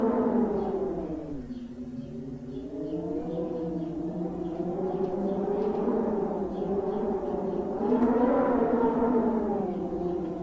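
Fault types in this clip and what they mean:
No technical faults are audible in this recording.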